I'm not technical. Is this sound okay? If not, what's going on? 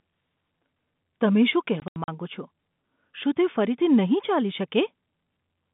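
No. Packet loss filled with silence hits from 1.8 to 2.08 s, right after "તમે શું". Pieces of the speech went missing in transit and were replaced by silence, about 140 ms in total, with the longest gap 80 ms. This fits 20 ms packets and causes abrupt holes.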